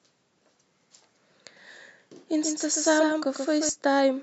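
From 2.43 to 3.69 s a doubled audio track appears: a dry copy trailing about 150 ms behind, a few dB quieter, likely from a slower second capture path.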